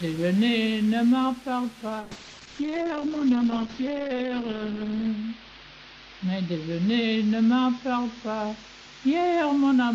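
From 2.0 s to the end the audio suffers a call bitrate drop. Starved of bits, the encoder narrows the bandwidth from 20 kHz to 8 kHz and codes coarsely, fitting roughly 64 falling to 8 kbps, worst for about 3.1 s. Unlike packet loss, it stays continuous and muffled-watery rather than gapped.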